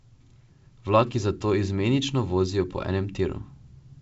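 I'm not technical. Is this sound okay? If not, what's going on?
Yes, this sound is okay, with nothing going wrong in it.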